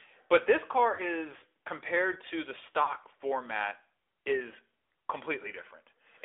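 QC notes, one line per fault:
Throughout: AMR narrowband mobile codec. The sound is confined to roughly 250 Hz to 3.5 kHz, with clearly audible buzzy, synthetic texture from pulse-excited vocal-tract modelling. The character fits the AMR-NB mode at about 10.2 kbps.
0.94–1.18 s and 2.84–2.91 s: lost AMR speech frames. After "but this car" and again after "compared to the", the decoder repeats the last good pitch and vocal-tract settings at falling gain, which smears and dips the sound. Each dropout fits two lost 20 ms frames. The sound recovers at "compared to the" and "format is" respectively.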